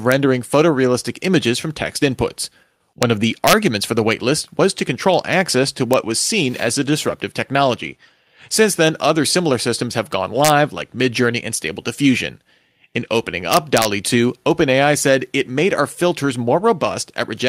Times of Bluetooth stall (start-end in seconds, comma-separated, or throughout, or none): none